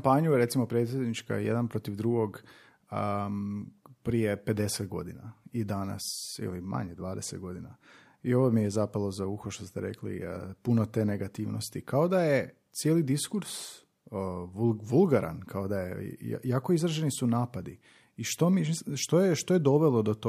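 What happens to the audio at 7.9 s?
Nothing goes wrong at 7.9 s; the speech runs through that moment intact, with no dropout, click or distortion.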